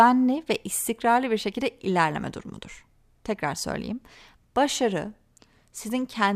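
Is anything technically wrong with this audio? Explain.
Yes. From 1.14 s to the end at about 6.36 s, the speech shows channel delay (comb filtering). One channel arrives roughly one sample late, a tiny fraction of a millisecond, and when the two are summed to mono, the shared content cancels at the top, with the first notch near 20 kHz. The sound becomes slightly dull. Unlike a low-pass filter, the treble fades gradually toward that notch instead of stopping at a set cut-off.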